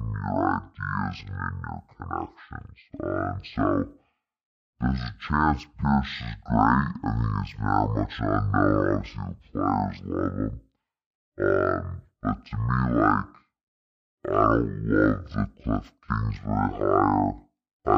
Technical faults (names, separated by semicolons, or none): stereo read as mono